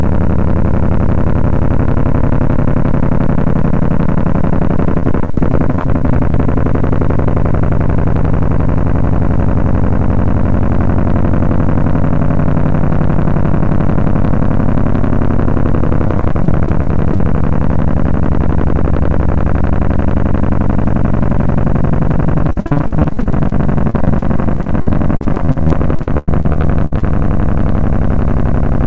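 Repeated packet loss (robotic sound) breaks up the audio four times: 5.00–6.35 s, 16.08–17.20 s, 22.50–23.53 s and 23.90–27.03 s. Packets keep dropping, and each hole is filled by extending the preceding sound. The result is choppy, with small pieces missing. The worst stretch is 22.50–23.53 s, where about a third of the span is concealed and gaps reach 58 ms. The longest gap, 94 ms, falls in the final run. Everything sits below 8 kHz, which fits a G.722 call codec.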